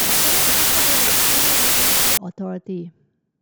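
From 0.0 to 2.17 s, loud harsh noise buries speech running about 1.33 times fast; this is wrong sample width, with packed 24-bit data read as 32-bit samples.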